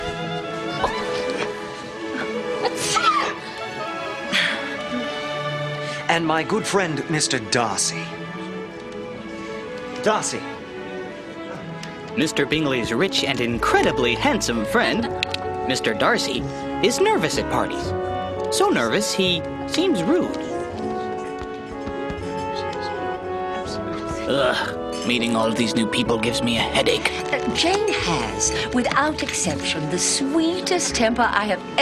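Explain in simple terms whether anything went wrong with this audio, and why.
Nothing went wrong here.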